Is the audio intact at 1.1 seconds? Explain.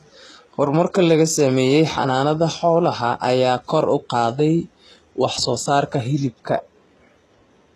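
No. At 1.1 seconds, as throughout the clip, there is plainly audible damage from what is likely HE-AAC compression, at a rate that points to about 16 kbps. Only the lower spectrum is actually coded, and the treble is regenerated by spectral band replication, with lower bands copied upward under a coarse envelope. Those synthetic highs don't line up harmonically with the real ones, so the speech's s sounds come out gritty and metallic, and nothing survives above 12.4 kHz.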